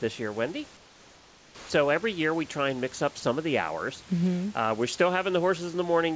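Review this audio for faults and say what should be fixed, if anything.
From 0.77 to 1.70 s, just before "every year we try", the room's background gives way to a flat, featureless hiss about 3 dB quieter. This is comfort noise in place of the background, likely because the sender stopped transmitting during the pause and the receiver synthesised a rough imitation.

Between 1.68 and 1.70 s, the start of "every year we try" arrives abruptly, missing about 20 ms of its soft beginning. This is an onset clipped by the voice detector. The detector was likely slow to register speech, so those first moments were never sent and the receiver played comfort noise instead.

From 3.20 to 3.23 s, between "try and mix up" and "of the hours", about 30 ms of speech vanishes into steady noise. This is sound dropped by the voice detector, which likely mistook that quiet stretch for background and briefly stopped sending. 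The G.722 call path carries nothing above 8 kHz, so the substituted noise is band-limited like the speech around it.

To prevent all three, disable discontinuous transmission or give the voice detector a longer hangover and a more sensitive onset threshold so pauses and quiet speech keep being sent.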